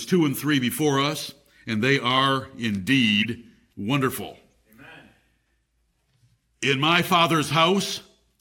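Brief chirps and blips cut into the speech at 1.96 s, just after "before us and they", then again at 3.22 to 3.26 s, and much more faintly at 4.51 to 4.53 s. Each is a corrupt frame decoded: damaged compressed data was played anyway, scattering energy into wrong frequencies for roughly a frame's length.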